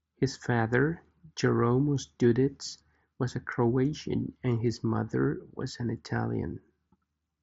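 Nothing stood out on listening to this speech clip.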